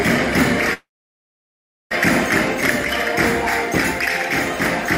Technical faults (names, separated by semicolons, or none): long network dropout